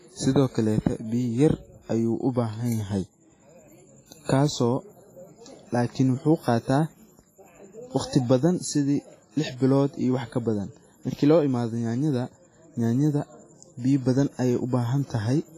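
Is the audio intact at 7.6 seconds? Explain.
No. At 7.6 seconds, as throughout the speech, the audio carries heavy transform-codec damage, most likely WMA compression. Quantisation noise is smeared over tens of milliseconds around each syllable, giving a ringing, washy texture and a hiss that swells and fades with the signal. Weak spectral components have been discarded, which fits a bitrate around 24 kbps, and nothing remains above 15.3 kHz.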